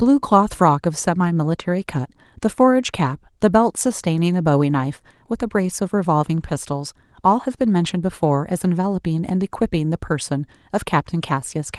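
No faults to report in this speech clip; the Opus coding at 24 kbps leaves only light traces on the sound.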